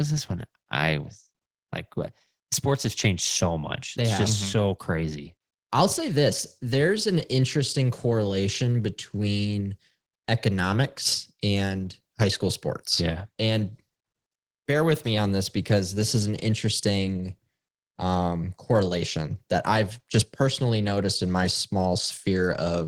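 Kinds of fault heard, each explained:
Listening to the speech recording, nothing stood out as a technical fault.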